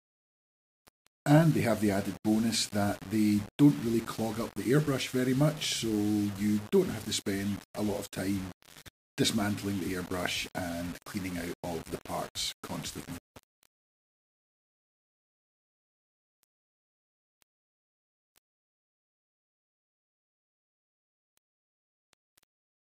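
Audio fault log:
throughout, low bit depth without dither: grainy distortion follows the sound, quiet passages turn gritty and the softest sputter or vanish, which fits values likely rounded to 6 bits, with error only about 20 dB down. The waveform shows coarse stair-steps, and the spectrogram shows broadband hash that tracks level.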